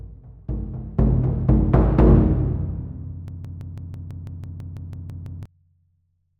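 At 3.28 s the sound locks into a broken-record loop and stays there until 5.46 s. A fragment about 165 ms long repeats exactly, back to back, 13 times. It has a rapid, stuttering pulse, around six repeats per second. Whatever should have played across those two seconds never arrives. The likely cause is a stalled player, encoder or stream that kept resending the last piece it held.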